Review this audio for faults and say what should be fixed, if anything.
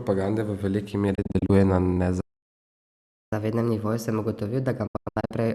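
Speech breaks into brief, clipped holes twice. From 1.15 to 1.50 s, about 144 ms of sound goes missing in short gaps scattered across 336 ms, the longest 24 ms. From 4.87 to 5.34 s it is worse: about 312 ms lost across 456 ms, with one gap of 96 ms. Each hole fades in and out over 8 ms. This is digital broadcast dropout. The receiver muted corrupted or missing frames, and the pattern points to six frame-sized losses the first time and thirteen the second. Stronger error protection or better reception would prevent it.

At 2.21 s the sound stops outright and stays silent for about 1.1 s, resuming at 3.33 s. The break is one solid gap rather than a scatter of holes, which marks it as a playback stall. The player was likely starved of data or blocked, and output nothing until it recovered. A larger playback buffer, or keeping the audio thread unblocked, would prevent it.

From 3.33 s to the end, the speech runs hurried and sits higher than before, playing 1.15 times faster and raised by about two semitones. 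This is catch-up at higher speed. After the stall, the player resampled its backlog to win back the lost time, so speed and pitch rose together. Time-stretching that keeps pitch fixed, or dropping the backlog, would prevent the shift.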